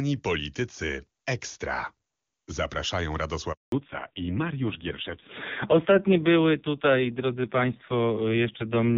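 A handover gap runs from 3.52 to 3.72 s: the speech cuts off abruptly and 200 ms of silence follows while the call switches networks and no frames arrive. A fallback to narrowband starts at 3.72 s and lasts to the end. After the clear HD Voice before the gap, everything above 4 kHz disappears, and the duller, raspier speech suggests a low-rate AMR narrowband mode.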